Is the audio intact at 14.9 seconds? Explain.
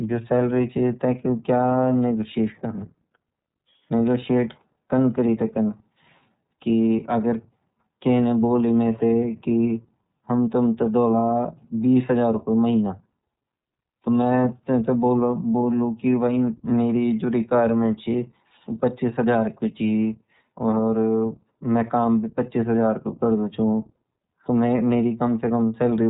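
No, at 14.9 seconds it's iLBC codec damage, present across the whole clip: each frame is coded independently, so it sounds rough and synthetic, with nothing above 3.8 kHz.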